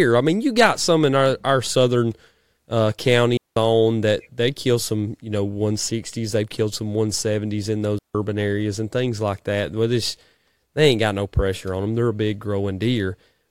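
At 3.37 s the speech drops into a clean hole of near silence lasting about 0.2 s, ending just before "that they kill some". A second, shorter hole of about 0.16 s follows at 7.99 s, between "in those" and "areas and things like". Both are digital wireless dropouts: the radio link lost too much data, so the receiver muted with a very fast fade rather than passing corrupted audio. No noise burst is heard at either edge.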